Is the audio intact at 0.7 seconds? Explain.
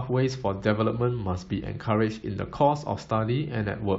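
Yes, the audio is intact at 0.7 seconds, with no audible fault at that point.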